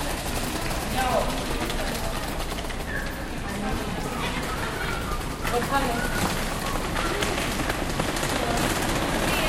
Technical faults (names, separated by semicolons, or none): audio missing between chunks